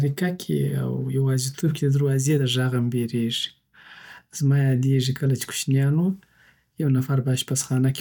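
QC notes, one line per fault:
Nothing to flag here: the speech comes through without a single fault worth noting.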